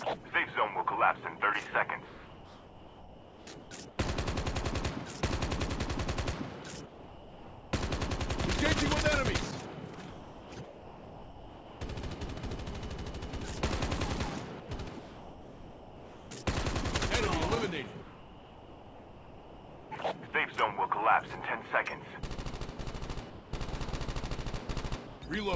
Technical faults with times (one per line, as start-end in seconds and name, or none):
0.29-0.32 sound dropped by the voice detector
2.06-3.98 sound chopped by the voice detector
6.86-7.73 sound dropped by the voice detector
9.95-11.81 sound chopped by the voice detector
14.60-16.46 sound chopped by the voice detector
18.02-20.33 sound chopped by the voice detector
23.30-23.51 sound dropped by the voice detector
25.07-25.22 sound dropped by the voice detector